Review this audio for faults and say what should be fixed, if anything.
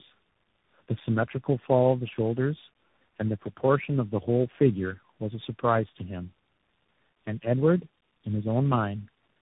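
Tandem speech coding is present for the whole clip. The speech is rough, muffled and warbly in a way no single narrowband codec would produce, and nothing is left above 3.8 kHz. The texture points to roughly four separate speech coders in series, ending in a CVSD-style stage, with the signal decoded and re-encoded at each network boundary. Each coder models an input already distorted by the previous one, so the errors compound. Prevention: keep the call in one codec end to end, using transcoder-free operation or pass-through between network segments.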